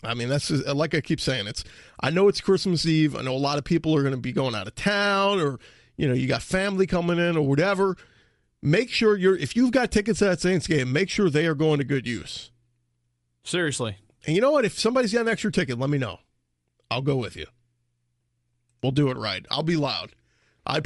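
Bluetooth LC3 compression throughout the speech, likely an LC3 link: upper frequencies become noise-filled, a breathy, grainy edge fitting about 48 kbps.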